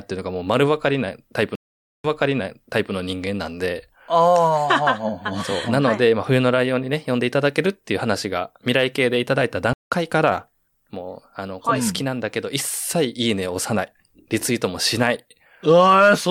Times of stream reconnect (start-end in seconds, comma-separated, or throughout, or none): 1.55-2.92, 9.73-9.95